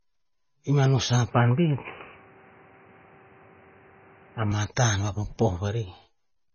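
MP3 compression runs through the whole speech clip, likely from a low-bitrate encode around 24 kbps: heavy codec damage, with weak frequency lines dropping in and out and nothing above 6.6 kHz. An input switched to a poorer device from 1.31 to 4.52 s, just after "i mano", likely a narrower microphone path: nothing passes above 3 kHz and a new noise floor sits roughly 30 dB down, with no gap at the switch and little change in level.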